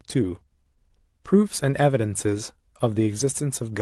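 No technical faults are audible.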